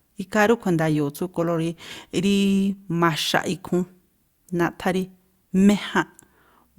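No technical faults can be heard anywhere in the speech recording; the signal stays continuous and stable throughout.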